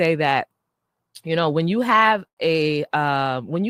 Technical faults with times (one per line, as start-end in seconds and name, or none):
2.27-2.39 short stall from a late packet